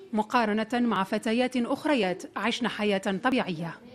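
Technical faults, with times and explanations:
0.96 s and 3.32 s, dropped buffer (overrun): each is a jump where the sound skips forward, skipping roughly 20 ms with no silent gap, likely because samples were overwritten before being read and the remaining audio was spliced directly together, unlike a dropout's audible hole.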